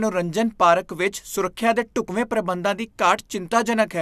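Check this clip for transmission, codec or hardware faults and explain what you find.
One fault is present. Overlap between stream segments at 2.09 s, after "ਪਾਰਕ ਵਿੱਚ ਸੁਰੱਖਿਆ ਦੇ": overlapping segment timestamps made the player discard genuine speech, so the waveform jumps with a tiny skip before "ਪ੍ਰਬੰਧਾਂ ਦੀ".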